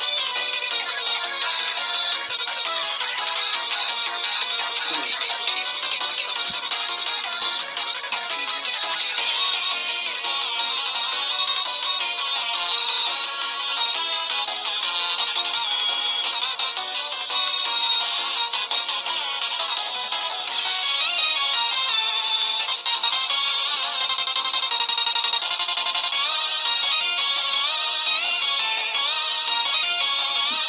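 Nothing technically wrong can be heard anywhere in the audio. No part of it calls for a time or a cause.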